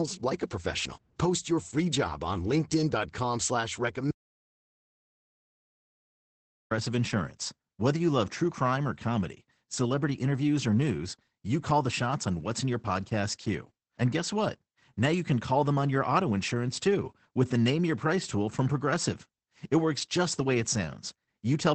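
From the first second the speech sounds muffled, slightly hoarse and a little robotic, with nothing above 8.7 kHz. That is Opus voice compression at about 12 kbps, working in wideband SILK mode, where the linear-prediction coder renders the excitation too coarsely to keep the voice's fine texture.

At 4.11 s the sound cuts off abruptly into silence, with no room tone at all, and returns mid-flow at 6.71 s, after roughly 2.6 s of lost audio. This is an audio dropout to silence, most likely from the input signal being interrupted while the recorder kept writing silence.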